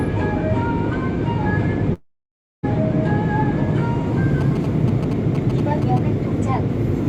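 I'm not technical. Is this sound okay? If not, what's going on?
No, there are two problems.

From 1.93 to 2.65 s the sound drops away for about 0.7 s. What you hear is a brief fading buzz that trails into roughly 0.6 s of near silence before the sound resumes further along, with that stretch missing. This is most likely a long network dropout: the audio stopped arriving, and the receiver filled the gap rather than replaying it. Unlike a short glitch, it's long enough that the sound visibly skips ahead.

From 4.41 to 5.99 s there's a galloping dit-dit-dit of short buzzes. These are GSM signalling bursts. A nearby older mobile phone sends quick radio pulses, as it does before a call or text arrives, and the equipment picks them up as noise. The buzz repeats 217 times per second, which gives it that distinctive rough tone. Unlike ordinary electrical hum, it comes in clusters and then stops.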